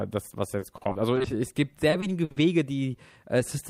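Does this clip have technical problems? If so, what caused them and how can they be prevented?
Yes: repeated packet loss (robotic sound) at 0.59–1.26 s and 1.90–2.38 s. Gaps of up to 60 ms were patched by stretching the preceding sound, giving a choppy quality with pieces missing. Waveforms show abrupt breaks, and spectrograms show smeared, repeated frames. A larger jitter buffer with forward error correction would prevent it.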